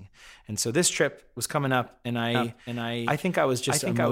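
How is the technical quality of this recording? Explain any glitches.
The recording has one clear fault: a doubled audio track from 2.35 s, just after "was coming up and", through to the end. What likely went wrong is that the signal was captured a second time along a slower route, or an edit left two copies out of alignment. A full-band duplicate, about 5 dB quieter and trailing by roughly 0.7 s, cuts in abruptly. It carries no decay or room colour, so the speech sounds overlaid with a flat, detached echo of itself.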